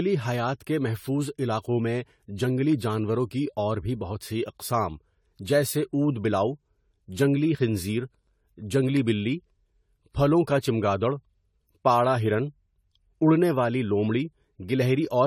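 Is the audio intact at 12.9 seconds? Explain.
No. At 12.9 seconds the speech carries generation loss, present across the whole clip rather than just at that moment. It sounds swirly, smeared and hollow, with blurred attacks, and the content stops near 19.2 kHz. The likely cause is repeated lossy re-encoding, about seven passes through an AAC-LC chain that points to 64 kbit/s. Each pass requantises on a shifted frame grid, so noise and spectral holes pile up. A single low-bitrate encode would not sound this degraded.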